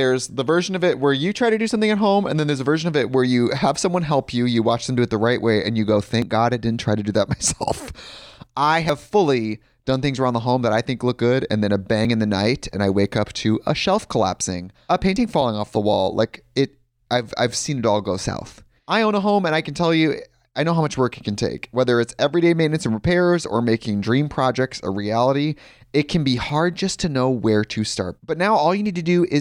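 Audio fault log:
6.22, 7.48, 8.89, 12.05, 15.16, 26.49 and 28.86 s, dropped buffer (overrun): the input was likely not read before the hardware overwrote it, so about 20 ms of speech vanished (nearer 50 ms at 8.89 s). The two sides join directly, giving a small forward jump.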